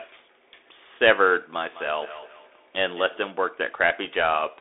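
Throughout, the speech carries Bluetooth CVSD headset codec damage: nothing above 3.8 kHz survives, the band sits roughly between 300 Hz and 3.6 kHz, and a granular hiss runs underneath. Unlike a plain low-pass, the one-bit slope coder audibly scratches sibilants and loud bright sounds, consistent with a 64 kbps headset link.

From 1.63 to 3.42 s, feedback echo between two devices appears. A second device's playback is caught by the other's microphone, and its echo canceller cannot remove that sound. The speech returns roughly every fifth of a second, at most about 19 dB below the speech. Unlike room reverb, these are discrete, evenly spaced repeats that sound thin and ringing.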